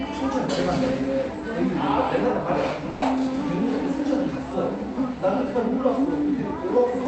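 A clip of everyday sound, carried over a WebRTC call path with Opus coding whose top end stops near 8 kHz, has a burst of packet loss from 2.90 to 3.05 s. About 120 ms of audio is missing. The receiver concealed it by extending and fading the preceding sound, so a held buzz or decaying hiss replaces the lost section before playback jumps ahead.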